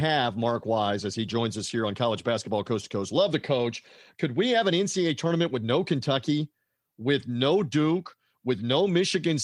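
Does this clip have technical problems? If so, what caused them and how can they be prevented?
No, nothing stood out as a technical problem on listening to this speech recording.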